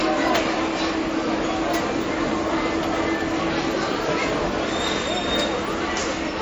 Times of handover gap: none

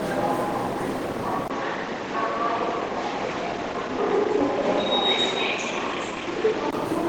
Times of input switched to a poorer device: 1.48-6.73

